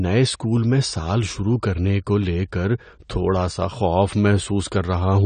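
AAC compression runs throughout the speech, with nothing above 9 kHz and plainly audible damage: a dull, smeared tone with fizzy sibilants. The likely cause is an AAC-LC encoder starving its frequency lines and lowering the cut-off, which fits a bitrate around 32 kbps.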